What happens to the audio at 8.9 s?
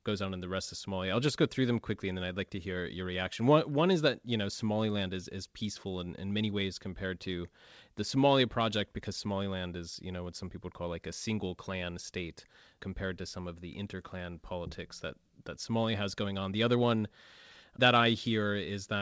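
Nothing goes wrong at 8.9 s: the speech carries straight through that moment, with only the ordinary band limit of the wideband call path, which leaves nothing above 8 kHz.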